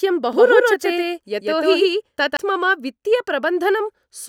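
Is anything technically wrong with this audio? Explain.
Yes. From 0.33 to 2.37 s the speech is shadowed by a second full-band copy about as loud as the original, trailing it by roughly 150 ms, with no decay or room colour, and it starts and stops abruptly. This is a doubled audio track, likely from the same signal being captured a second time through a slower path.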